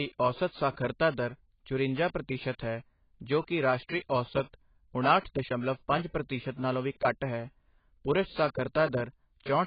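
AAC compression damage runs through the whole clip and is heavy. The speech has nothing above about 4.8 kHz, so it sounds dull and boxed-in, and sibilants turn fizzy and smeared. The likely cause is an AAC-LC encoder starved of bits, which fits a rate of roughly 16 kbps. At that rate it lowers its cut-off and quantises the remaining frequency lines so coarsely that gaps and substitute noise leave a warbling texture on sustained sounds.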